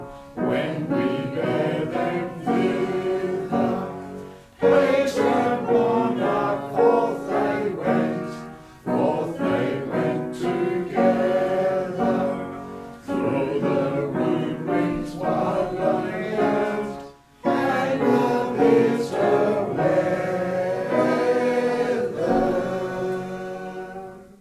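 No technical faults are audible.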